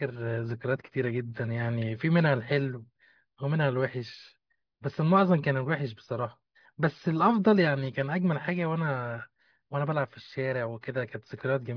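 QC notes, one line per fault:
No faults heard on this speech clip.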